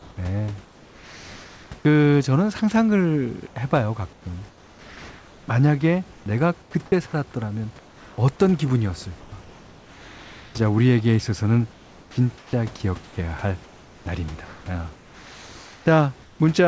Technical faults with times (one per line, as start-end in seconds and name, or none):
0.00-1.70 comfort noise in place of the background
3.47-5.48 comfort noise in place of the background
6.62-6.74 comfort noise in place of the background
7.79-8.18 comfort noise in place of the background
9.20-9.32 comfort noise in place of the background
11.72-16.40 comfort noise in place of the background
12.12-12.17 onset clipped by the voice detector